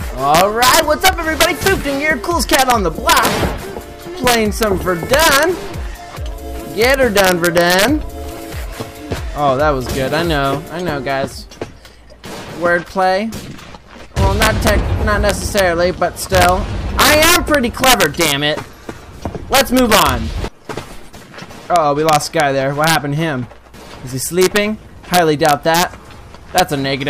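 Integer overflow runs right through this audio: the level is pushed about 5 dB past full scale, and instead of clamping, the loudest peaks wrap to the opposite sign. Only a tiny fraction of samples go over, but each one snaps out as a harsh crack, far nastier than ordinary clipping.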